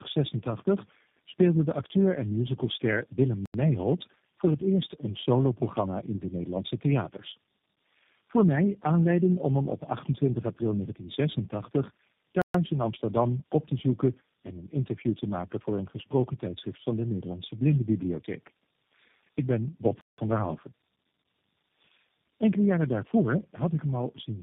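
Right from the start there's tandem speech coding. The audio sounds like it went through roughly four low-rate speech codecs in a row, each one coding the previous one's damage again. The result is rough, muffled and warbly, with nothing above 3.7 kHz.

Then there are three blocks of digital silence: 3.46 to 3.54 s (85 ms), 12.42 to 12.54 s (128 ms), and 20.01 to 20.18 s (171 ms). Each is a hard dropout to silence. That points to output buffers not being filled in time, and the shortest and longest fit 4096- and 8192-sample blocks.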